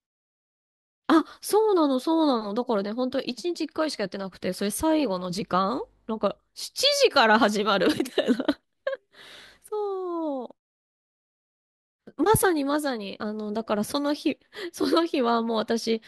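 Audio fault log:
Nothing stood out on listening to this speech clip.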